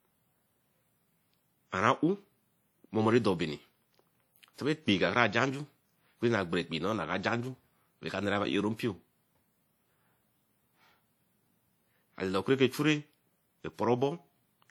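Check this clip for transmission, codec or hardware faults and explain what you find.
One fault runs through the whole recording. WMA compression, throughout: likely a transform codec at a rate fitting about 48 kbps zeroes weak detail, so the speech sounds plainly ringing and washy, with breathing hiss.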